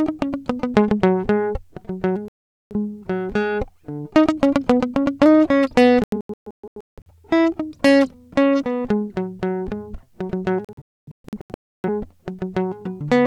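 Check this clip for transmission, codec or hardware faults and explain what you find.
The music cuts out three times from digital broadcast dropouts: a clean gap from 2.28 to 2.75 s, then broken stretches of short holes from 6.04 to 7.12 s (longest about 0.17 s) and 10.65 to 11.89 s (longest 0.3 s). Each time, the receiver got corrupted or missing frames and muted until good ones arrived, so that part of the music is gone.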